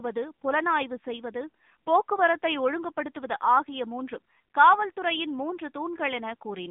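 From start to end the speech carries AMR narrowband mobile codec damage, consistent with AMR-NB at about 7.4 kbps. The line passes roughly 150 Hz to 3.6 kHz, with nothing above 3.7 kHz. The vocal-tract model rebuilds the voice from sparse pulses, so it sounds plainly buzzy and synthetic.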